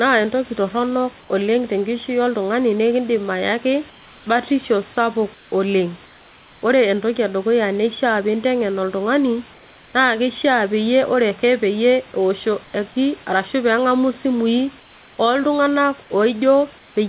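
In pauses at 1.2–1.3 s (after "entoki torronok"), 3.9–4.26 s (before "batisho sapuk"), 5.34–5.52 s (after "ayaki batisho sapuk"), 6.06–6.62 s, 9.54–9.94 s, 14.8–15.18 s and 16.78–16.96 s, the room background turns flat, featureless and about 2–3 dB quieter. This is likely comfort noise in place of the background: the sender stopped transmitting in the gaps, and the receiver filled them with synthetic noise. On this narrowband call path nothing is heard above 4 kHz.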